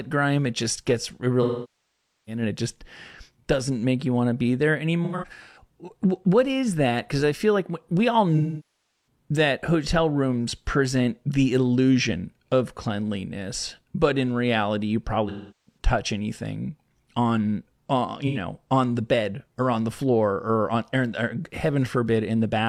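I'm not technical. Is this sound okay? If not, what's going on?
No. In five places, pieces of the compressed speech went missing and the player patched each hole with a guess built from the last sound it received. This is called AAC frame loss with concealment. From 1.42 to 2.42 s, between "it just gets it" and "and it just", and from 8.37 to 9.07 s, the patch smears and fades toward silence. From 5.04 to 5.60 s, short dropouts are scattered. At 15.28 to 15.78 s, after "but in reality you", and at 18.27 to 18.38 s, before "on the bed or", brief noisy, phasey blurs replace the speech.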